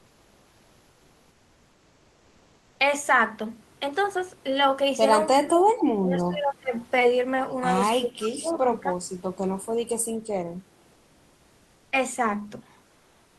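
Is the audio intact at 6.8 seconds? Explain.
No. From 6.79 to 6.85 s there is an echo leak: a faint, short scrap of the voice returns about 326 ms after the original, roughly 30 dB below the speech. The likely cause is a far end playing the call over a loudspeaker, where the echo canceller did not fully remove what its microphone picked up, so a remnant was sent back. It is brief and quiet, and sounds like a delayed ghost of the voice.

Just before that, from 5.98 to 6.74 s, there is speech suppressed in double talk: the voice dips, at its deepest by around 20 dB, across about 0.7 s. This is likely an echo canceller that could not separate the local talker from loudspeaker echo while both sides spoke at once, so it turned everything down.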